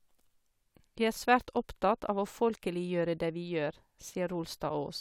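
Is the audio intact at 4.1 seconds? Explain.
Yes, the speech at 4.1 seconds plays through intact, with no dropout, click, distortion or other fault at that moment.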